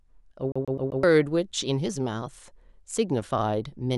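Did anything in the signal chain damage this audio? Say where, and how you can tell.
Yes, the damage happens at playback, and it's the classic CD stuck on one turn. From 0.52 to 1.03 s the same chunk of speech, about 128 ms long, plays four times in a row, with a tiny mute at each restart, giving that fast, even stutter. A scratch keeps kicking the laser back one track at the same point on each rotation, so it rereads that slice until it finally escapes.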